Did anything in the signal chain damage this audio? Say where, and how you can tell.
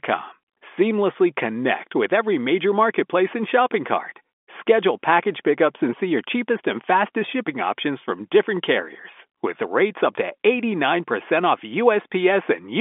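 No, nothing in the signal chain damaged this speech.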